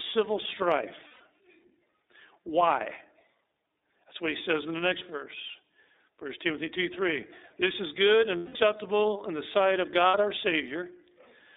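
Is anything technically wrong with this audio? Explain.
Yes. The speech has passed through the iLBC codec and has three dropouts from lost iLBC frames.

The iLBC coding runs through the whole clip. Each block is coded on its own, and the rough, slightly synthetic texture fits the 13.33 kbps mode with 30 ms frames. The damage is plainly audible. The band is held to roughly 300 Hz to 3.7 kHz, so the voice sounds thin and telephone-like. On a spectrogram, energy stops sharply near 3.7 kHz and nothing shows below 300 Hz.

Lost iLBC frames occur at 1.08–1.21 s, 8.37–8.56 s and 10.08–10.15 s. The gaps last 120 ms, 180 ms and 60 ms, which points to about four, six and two frames missing. In each gap the decoder repeats the last pitch cycle mixed with noise, so you hear a held, buzzy vowel that fades over the longer gaps, most clearly in the longest gap. On a spectrogram each gap shows flat, smeared harmonics. 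The waveform shows a repeating cycle that shrinks in the longer gaps, and normal speech resumes almost immediately after each gap.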